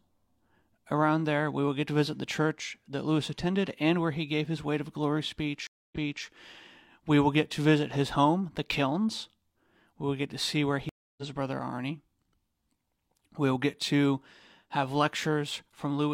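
At 5.67 to 6.25 s the speech drops out for 253 ms and comes back 325 ms earlier, repeating a moment. At 10.89 to 11.23 s, after "get to see where", a 282 ms gap skips about a third of a second before "his brother". Both are stream reconnects, where the connection broke and playback restarted mid-stream with a fresh decoder.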